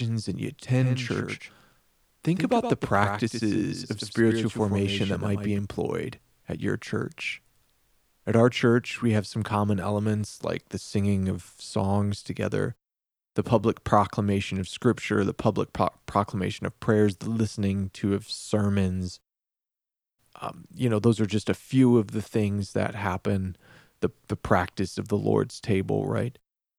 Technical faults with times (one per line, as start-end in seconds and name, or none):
0.79-5.59 doubled audio track